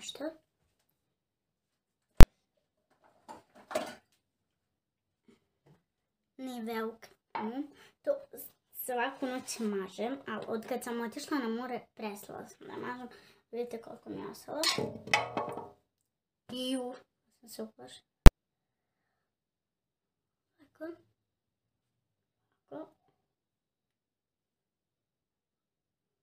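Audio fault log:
2.21–2.23 s and 18.26 s: invalid numbers at full scale. A calculation returned infinite or invalid values, and the output was pinned at maximum level for a whole block. Each block lasts only 23 ms and 12 ms, which fits 1024-sample and 512-sample blocks. So each is heard as one sharp, very loud bang.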